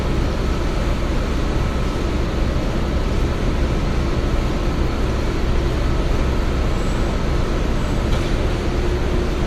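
No technical faults are audible.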